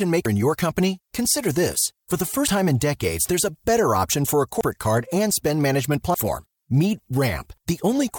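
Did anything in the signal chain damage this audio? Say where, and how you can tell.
Yes. Dropped buffer (overrun) at 0.26 s and 4.61 s: each time the speech jumps ahead by about a tenth of a second with no silence. This likely happened at the driver or buffer stage, where samples were overwritten before being read and the surrounding audio was butted together.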